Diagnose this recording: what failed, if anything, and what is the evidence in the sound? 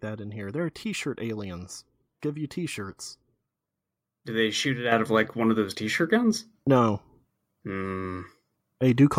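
The failure is a microphone volume stepped up, at the call-processing stage. At 4.92 s the speech and the background noise floor jump together by about 7 dB in a single step. Automatic gain control in the call software raised the device's input volume at once rather than ramping it.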